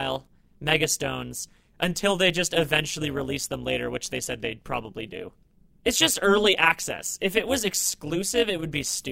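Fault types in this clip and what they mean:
Overlap-add ripple: the speech was split into windowed frames and rejoined with overlaps whose gains do not add up to a steady level, so loudness swings by about 11 dB once per frame, roughly 200 times a second, for the whole clip. That rate gives a metallic buzz laid over the voice rather than a slow tremolo. Unlike vibrato or wow, pitch stays put. Only level pulses, and it never stops or leaves gaps the way dropouts would.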